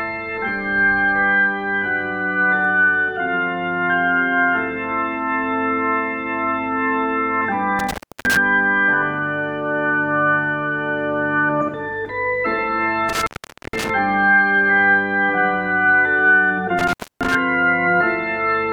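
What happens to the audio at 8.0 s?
An intermittent contact fault runs from 7.79 to 8.37 s. A loose connection opens for about 341 ms, cutting the sound to faint hiss. Crackle spikes bracket the near-empty gap on the waveform and spectrogram.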